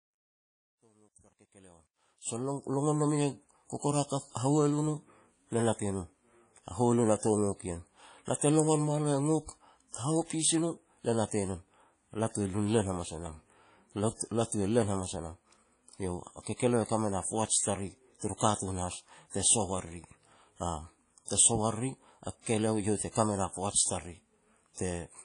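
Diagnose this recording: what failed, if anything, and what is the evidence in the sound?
Codec stage. The whole clip carries the ringing, washy character of a transform codec, with hiss that rises and falls with the speech, and the codec damage is plainly audible throughout. Nothing is present above 10.1 kHz. This is likely WMA compression. The long-block quantisation noise smears across tens of milliseconds, and weak spectral lines are zeroed, which fits a WMA 1 encode at a low bitrate around 32 kbps.

Sample-format conversion or volume stage. The opening fade, from 0.0 to 2.69 s, shows truncation distortion on a fade, and it is worst from 0.0 to 1.81 s. The quiet portion sounds gritty rather than smoothly attenuated. A digital gain stage reduced the signal without dither, so the low-level waveform collapsed into a few coarse quantisation steps. The grain of it points to roughly 11 bits of usable resolution.

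Codec stage. There is pre-echo from 23.12 to 23.15 s: a short hiss arrives about 34 ms ahead of a sharp attack, and the attack itself sounds softened. The transform block containing that transient spread quantisation noise sized for the loud onset evenly across the whole block. That noise therefore fills the quiet moment before the attack, where nothing masks it.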